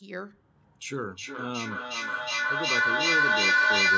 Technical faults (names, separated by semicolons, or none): feedback echo between two devices